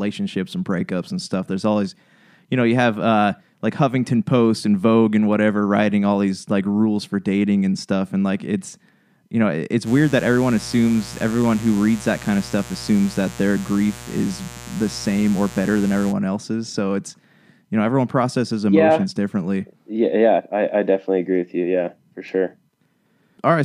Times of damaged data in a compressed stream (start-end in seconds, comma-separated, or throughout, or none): none